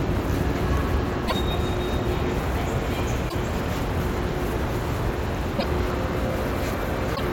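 A recording of sounds with damaged data in the compressed stream: brief blips of about 80 ms at 1.24, 3.25, 5.55 and 7.12 s, where corrupted frames are misread and the decoder loses sync, then resumes at the next valid frame header.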